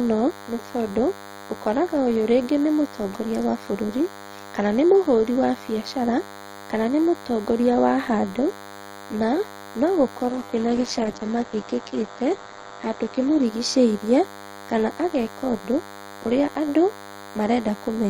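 Throughout the recording, a DECT cordless phone buzz is present. A nearby DECT handset or base station sends a radio burst every 10 ms, and the audio circuitry rectifies that energy into the signal path. It comes through as a steady, thin buzz at 100 Hz, rich in harmonics, sitting roughly 20 dB below the speech and never letting up.

From 10.3 s to 13.51 s, just after "na no", there is a call bitrate drop. The bandwidth estimate fell, and the encoder was pushed to a much lower rate, consistent with a fall from around 32 kbps to 10 kbps. The audio bandwidth narrows from 20 kHz to 8 kHz, so the top end disappears. Coarser coding also makes the speech rough and watery, and the worst of it lasts about 3.1 s before the rate recovers.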